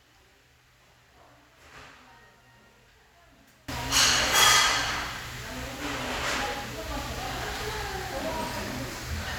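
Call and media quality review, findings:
0.0–3.68 s: level drops about 25 dB, remaining sound faint, centre content nearly gone. Likely one channel inverted in the stereo path, so shared content cancels on the mono fold-down and only the channel difference survives. Check polarity on that leg.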